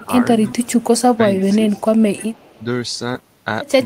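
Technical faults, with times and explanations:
0.00–0.23 s and 1.14–1.94 s, speech suppressed in double talk: the level dips by about 10 dB, then about 15 dB, over roughly a tenth and then half a second in pieces, likely because an echo canceller mistook overlapping talk for loudspeaker echo and attenuated it.
0.47–1.01 s, 1.37–1.56 s, 1.76–1.81 s and 2.13–2.63 s, echo leak: a faint copy trails the sound by 308 ms, about 20 dB down at first and about 30 dB down later, likely from a loudspeaker echo the far-end canceller failed to fully remove.
3.13–3.17 s, short concealed packet loss: about 20 ms of audio never arrived, and the decoder bridged roughly 11 ms by extending the preceding sound before blending back, leaving a brief smear.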